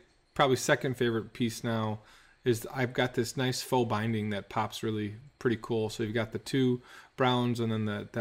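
No technical faults are audible.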